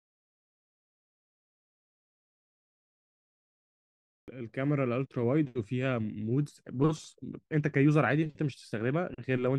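At 4.22 s, the first sound after a pause of about 4.2 s comes in abruptly, with its onset missing. This is a clipped start after a pause. The output path had gone idle during the silence and needed time to wake or re-lock, so roughly 59 ms of audio, up to 4.28 s, never reached the output. The speech therefore jumps straight in without its initial sounds.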